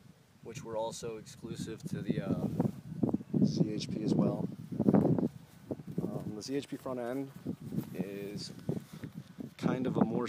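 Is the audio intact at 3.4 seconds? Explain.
Yes, the audio is intact at 3.4 seconds, with no dropout, click, distortion or other fault audible at that point.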